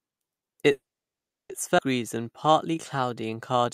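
A call audio freeze runs from 0.71 to 1.51 s, likely from delayed packets draining the jitter buffer. The sound stalls into about 0.7 s of silence, then resumes with nothing lost.

A skip ahead at 1.77 to 1.80 s drops roughly half a second of speech, splicing both sides almost directly together with only a tiny joining gap.

A jitter buffer slow-down from 2.03 to 3.63 s repeats pitch periods to rebuild reserve, adding 156 ms so the speech plays at 91% speed, drawn out at unchanged pitch.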